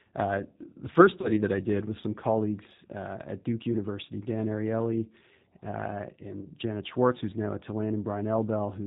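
The whole clip runs through what sounds like the G.729 codec at 8 kbit/s: nothing above 4 kHz, and speech comes out rough and a bit synthetic. Then there's VoIP packet loss concealed by the speech codec from 1.21 to 1.34 s, between "the first" and "that I did was", which fits three lost 10 ms frames. The decoder stretches the last sound into a buzzy tone or coloured noise that fades, and it stays weak until the voice recovers. A shorter smear at 6.42 to 6.48 s fits one lost frame.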